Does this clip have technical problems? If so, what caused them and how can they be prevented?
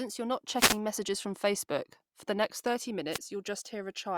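Yes. Wireless microphone noise hits at 0.55 to 0.79 s and 3.11 to 3.19 s: the analogue FM radio link fades as reflected signals cancel the direct one, so receiver noise rises and covers the voice as a brief swish of static. Use diversity receivers, keep antennas in clear line of sight, and reduce the transmitter-to-receiver distance.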